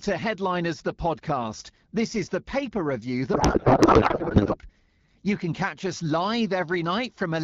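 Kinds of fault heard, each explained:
Codec payload misread: from 3.33 to 4.57 s the speech gives way to garbled noise and warble that barely follows it, because the decoder unpacks the AMR-WB frames with their bit fields in the wrong places, which fits octet-aligned packing being read as bandwidth-efficient.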